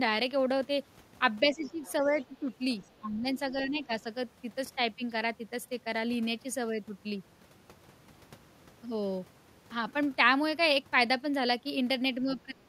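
Speech suppressed in double talk, 1.43 to 2.37 s, 2.99 to 4.05 s and 12.23 to 12.57 s: the talker dips by up to about 15 dB, then about 20 dB at the end, likely because the echo canceller mistook overlapping talk for echo. The other side's voice leaking through, 1.86 to 2.05 s, 2.22 s and 2.83 to 2.99 s: faint scraps of a second voice, about 25 dB and then about 35 dB below the speech, likely residual loudspeaker echo the canceller missed.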